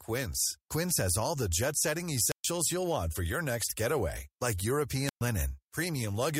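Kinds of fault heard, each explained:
Wireless microphone squelch dropout: at 2.25 to 2.46 s and 5.05 to 5.21 s the radio link from an analogue FM microphone weakens until the receiver's squelch shuts the output, so a short burst of hiss gives way to near silence of about 0.13 s and 0.12 s before the speech returns.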